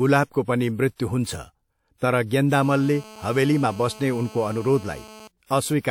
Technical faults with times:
0.42-0.48 pre-echo
1.97-2.01 pre-echo
2.62-5.28 GSM phone buzz
5.46-5.50 pre-echo

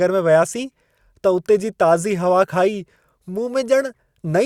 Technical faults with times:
none

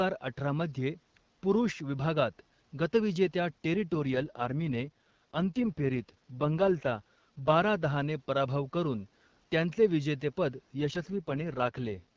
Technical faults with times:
3.94-7.58 AMR rate drop
10.80-12.16 AMR rate drop

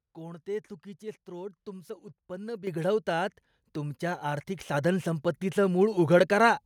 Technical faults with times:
2.67 microphone volume stepped up

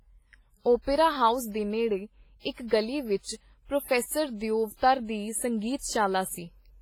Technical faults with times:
0.00-6.81 WMA compression

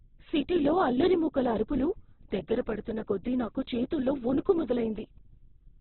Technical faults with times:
0.00-5.80 Opus compression

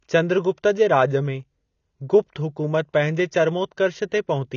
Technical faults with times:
0.00-4.57 AAC compression

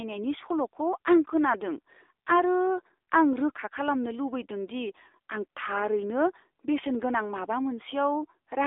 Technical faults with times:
0.00-8.67 AMR narrowband mobile codec

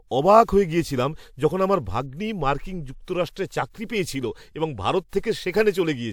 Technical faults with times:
5.09-5.13 pre-echo

